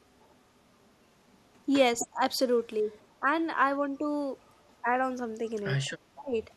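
From 0.19 to 1.37 s a faint echo leak trails the speech: a delayed copy arrives 260 ms behind, very low, around 40 dB down. At 1.99–2.07 s a short scrap returns much louder, only about 10 dB below the talker. The likely cause is a far-end loudspeaker whose echo canceller let part of the returned signal through. Unlike room reverberation, which smears into a smooth tail, this is a distinct second copy at the same fixed 260 ms lag each time.

Overlapping that loud scrap, speech suppressed in double talk sets in at 2.03–2.21 s. The talker's level sinks by roughly 15 dB for about 200 ms, likely because the canceller, faced with both sides at once, turned everything down. More echo leak follows at 2.93–3.14 s, faint at about 35 dB down. Suppression returns at 3.20–3.26 s (about 10 dB) and at 3.98–4.09 s (a slight dip near 5 dB). Unlike a packet-loss dropout, these dips follow the overlap.

A moderate echo leak, roughly 25 dB down, sits at 5.46–5.92 s. 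The deepest suppression, about 20 dB over some 200 ms, comes at 6.15–6.36 s.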